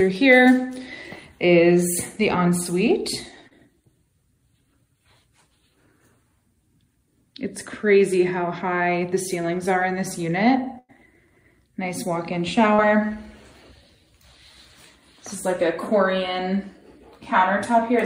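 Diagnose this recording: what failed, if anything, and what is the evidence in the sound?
The network path dropped packets in two places: short concealed packet loss at 3.47 to 3.53 s and again at 12.75 to 12.80 s. Each is a brief smear where about 40 ms of audio never arrived in time. The receiver papered over roughly 33 ms of that by extending whatever sound came just before, pitch-based if tonal, shaped noise if not, then crossfaded back into the real stream. You hear a tiny wobble.

There's also a burst of packet loss at 10.79 to 10.91 s, again a network problem but longer. About 100 ms went missing, and the concealment stretched the previous sound for roughly 98 ms while fading it down. That's why you get a held, decaying buzz or hiss rather than a clean gap. When the stream picks back up, it lands further along, so that tenth of a second of content is simply gone.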